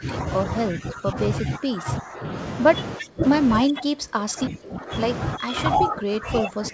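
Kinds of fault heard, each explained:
Speech suppressed in double talk: the speech level sinks by around 15 to 20 dB in stretches from 0.0 to 2.37 s, 2.97 to 3.24 s, 3.63 to 4.94 s and 5.35 s to the end, likely an echo canceller turning down the near talker while the other side also speaks.
Echo leak: faint, brief copies of the speech trail the original by 343 ms at 0.71 to 0.77 s and 2.99 to 3.07 s, roughly 15 to 20 dB below it, likely loudspeaker pickup that the far end's echo canceller failed to remove.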